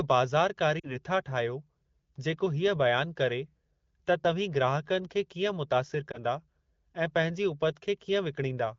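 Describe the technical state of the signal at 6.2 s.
At 6.2 s the signal is just recovering from lost AMR speech frames, spanning 6.12 to 6.20 s, which fits a single lost 20 ms frame. The AMR-WB decoder, running at 12.65 kbit/s, rebuilt the gap by repeating the previous pitch and vocal tract settings at reduced gain. The result is a brief dip or warble rather than a hard silent gap or click, and the sound returns weak for a moment.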